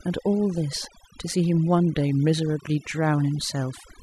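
From start to finish the speech carries overdone noise removal: the denoiser was pushed so hard it keeps switching off individual frequency bands sitting near its noise estimate, taking soft bits of the voice along. You hear gaps with glittery little specks.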